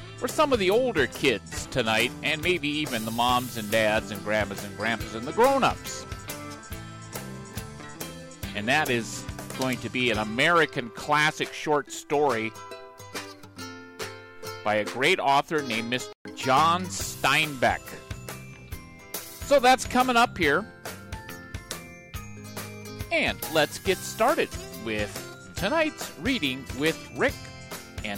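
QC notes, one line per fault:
16.13–16.25 s, playback stall: the sound halts for about 125 ms, likely from the player starving for data, then resumes.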